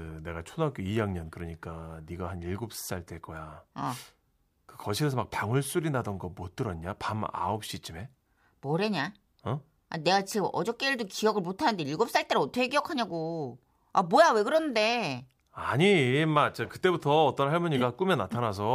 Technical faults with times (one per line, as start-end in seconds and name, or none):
none